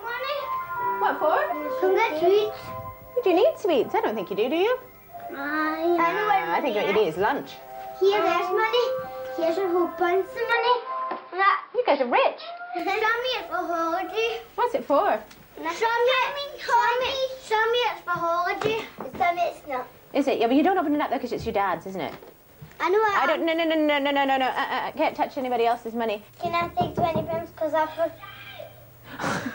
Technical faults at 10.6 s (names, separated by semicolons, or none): input switched to a poorer device